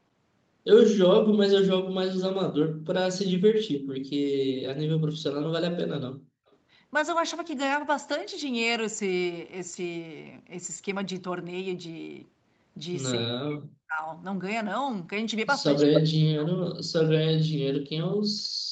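Around 2.72 to 2.85 s, 3.98 to 4.10 s and 6.22 to 6.26 s the room sound behind the speech gets yanked down by about 39 to 40 dB and then springs back. That's background gated by the echo canceller: while the far end was playing out of the loudspeaker, the canceller clamped the microphone hard, so the ambience briefly vanishes into near-silence.

Just after that, at 6.51 to 6.56 s, there's a tiny, very faint repeat of the speech arriving about 279 ms late and sitting way down in level. That's an echo leak. Its likely cause is the loudspeaker side's canceller not fully scrubbing what its mic picked up, so a scrap got sent back.

From 13.27 to 14.02 s the talker's voice drops away sharply, roughly 40 dB at its deepest. That's speech suppressed in double talk, likely because both sides were talking at once and the canceller couldn't tell the local voice from the speaker echo, so it ducked everything.

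The worst stretch starts at 15.75 s. A second echo leak, again about 279 ms behind, runs to 16.01 s, and this time it's roughly as loud as the speech itself, so you get a doubled copy. At 15.87 s double-talk suppression also kicks in and chops the voice down by something like 40 dB until 16.63 s. The speech gets both doubled and gutted in the same moment. Throughout, nothing is heard above 8 kHz.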